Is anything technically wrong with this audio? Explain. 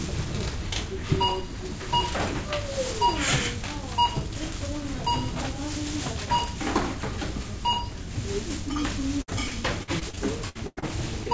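Yes. From 9.22 to 10.84 s there is repeated packet loss (robotic sound): about ten gaps, up to 99 ms each, are patched by stretching the previous sound. Roughly a quarter of that stretch is filled in, which makes it choppy rather than a single isolated dropout. The wideband call codec's cutoff at 8 kHz is present throughout.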